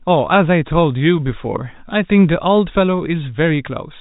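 Nothing stood out on listening to this speech clip, which is carried as telephone-band audio with no content above about 3.8 kHz.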